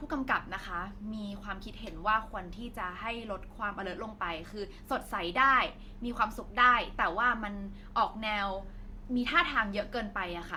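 From start to finish the speech carries two layers of compression damage at once, pointing to transcoding between lossy codecs, likely an MP3 encode followed by a lower-rate Opus encode. The second stage spends bits on the first stage's smearing and adds its own artefacts, so the two sets of damage are heard together. A spectrogram shows a band edge near 20.2 kHz, with patchy, blotchy high-frequency energy flickering beneath it.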